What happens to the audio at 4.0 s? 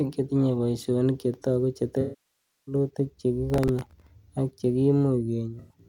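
Processor overload crackle runs from 3.50 to 4.07 s. Very short buffers, roughly 1.5 ms, keep missing their deadlines. Stale audio repeats, giving a gritty crackle.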